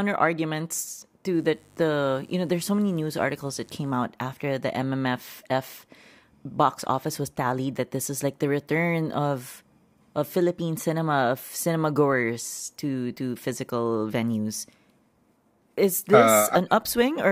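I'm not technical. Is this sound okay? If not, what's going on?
No. From 1.31 to 4.08 seconds, electrical interference from the power supply leaks into the recording, spiking twice in every cycle of the 50 Hz mains. This is mains buzz, a steady, raspy drone sitting faintly underneath the speech until it stops.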